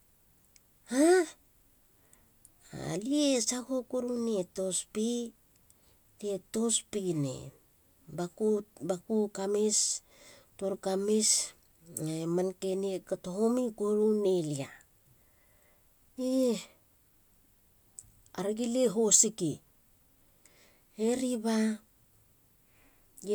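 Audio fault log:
No faults detected.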